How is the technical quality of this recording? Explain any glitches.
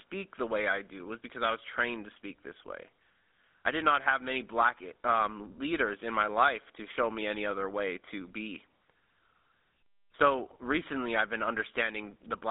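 The recording has been through a low-rate mobile voice codec, so the speech is narrowband and roughened from start to finish.

The GSM full-rate codec damage runs throughout. Pulse-driven vocal-tract modelling, likely at 13 kbit/s, produces plainly audible buzzy, gravelly speech confined to 250 Hz to 3.6 kHz.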